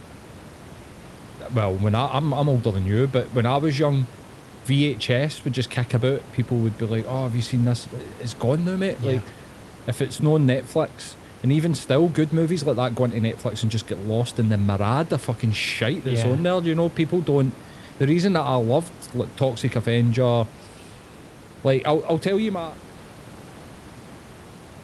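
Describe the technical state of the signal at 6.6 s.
At 6.6 s the signal is intact, with no dropout, glitch or level change.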